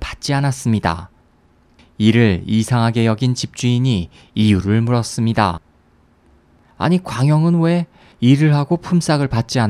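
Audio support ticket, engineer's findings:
Listened to the full speech recording and nothing stood out as a technical fault.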